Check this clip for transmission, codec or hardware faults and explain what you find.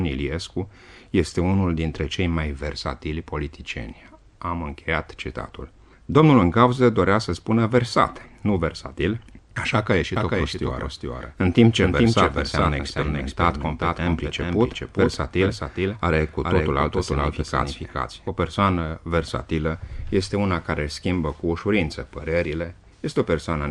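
One fault stands out: a doubled audio track from 10.16 s to 18.28 s. A second full-band copy of the sound runs roughly 400 ms behind the original and about 5 dB quieter, likely because the same signal was captured again through a slower path. It sounds like a dry, flat slapback with no room tail, cutting in and out abruptly. On a spectrogram every event reappears as a fainter duplicate shifted right; the waveform shows matching repeated envelopes.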